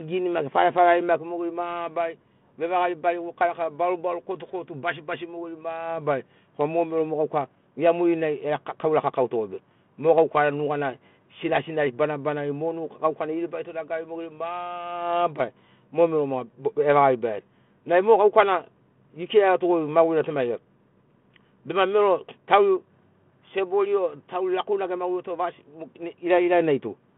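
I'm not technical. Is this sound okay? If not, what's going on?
Yes, this is just speech with the slightly narrow sound of an ordinary phone call, and nothing goes wrong anywhere in it.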